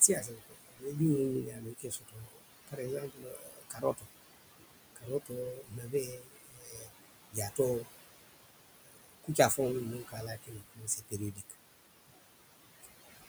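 A speech recording with room noise sitting only about 10 dB below the talker, with noise suppressor artifacts throughout. The suppressor pulls the steady background down by about 20 dB, frame by frame. So the noise drops away in gaps and swells back under the words.

Speech cut by the noise suppressor occurs in six stretches: 0.0 to 0.96 s, 1.43 to 4.07 s, 4.96 to 6.9 s, 7.31 to 7.89 s, 8.73 to 9.59 s, and 9.93 to 11.55 s. The suppressor mistakes soft speech for noise and turns it down by about 18 to 21 dB. Quiet consonants and word endings sound swallowed. The longest losses, around two seconds in total, fall in the 1.43 to 4.07 s stretch.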